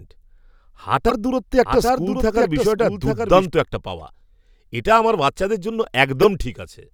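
At 1.07–1.12 s, damaged data in a compressed stream makes the decoder lose sync: a brief glitch. From 1.66 to 3.46 s a doubled audio track, likely a second slower capture path, adds a copy about 5 dB quieter and roughly 0.7 s behind. It starts and stops abruptly, with repeated waveform shapes offset in time. Similar corrupted-frame blips return at 3.99–4.01 s and 6.22–6.25 s.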